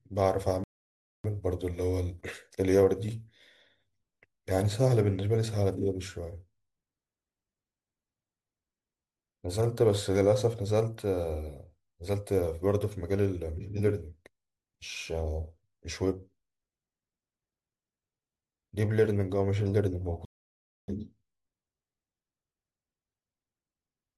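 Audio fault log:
0.64 to 1.24 s, rebuffering stall: the speech drops to silence for about 0.6 s and then picks up exactly where it left off. The player ran dry of downloaded audio and just waited for more to arrive, so nothing is skipped; the pause is simply extra time.
20.25 to 20.88 s, rebuffering stall: the same thing again, a gap of about 0.63 s, with the speech resuming seamlessly once the buffer refilled.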